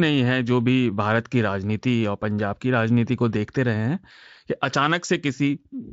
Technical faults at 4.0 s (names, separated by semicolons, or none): none